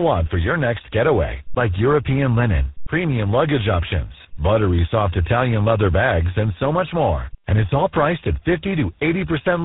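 Tandem speech coding runs through the whole speech clip: it sounds rough, muffled and warbly, with nothing above 3.8 kHz, which points to three speech coders in a row, likely CVSD, G.726 and GSM full rate, each re-encoding the previous one's already degraded output.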